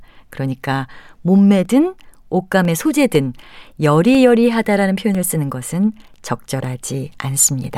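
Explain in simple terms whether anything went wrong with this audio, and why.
A small tick or pop cuts into the speech every half second, from about 0.15 s to 7.64 s, roughly fifteen times in all. Each is a gap of around a millisecond where the sound drops to silence, so the ticks are heard only while someone is talking. These are periodic USB or driver dropouts: a background task on the computer briefly blocked the audio connection at a fixed rhythm, and each time a sliver of sound was lost.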